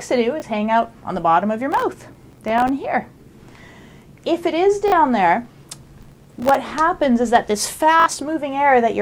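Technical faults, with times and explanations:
0.40–0.42 s, repeated buffer: a 20 ms piece of audio sounds twice with a hard join, because the next block did not arrive in time and the last one was replayed. It is heard as a brief stutter, and about 20 ms of audio is lost.
1.72–2.69 s, processor overload crackle: a run of missed deadlines on very small buffers, around a millisecond or two each. About a few dozen of them drop out as short silent gaps with hard edges, heard together as gritty crackle riding on the sound until the load eases.
4.88–4.92 s, repeated buffer: the same 20 ms block plays three times in a row, two extra repeats, so the stutter is longer than the first. About 40 ms of new audio is skipped.
6.03–6.55 s, processor overload crackle: a shorter burst of the same tearing texture. Many tiny buffers miss their deadline and are replaced by silence, so hard-edged dropouts pile up into crackle that stops once processing catches up.
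8.00–8.06 s, repeated buffer: the worst of the three. A 20 ms block sounds four times, three extra plays, giving a short stutter, and roughly 70 ms of audio is lost.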